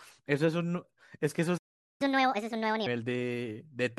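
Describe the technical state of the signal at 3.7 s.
At 3.7 s the speech signal is intact, with no audible fault at that moment.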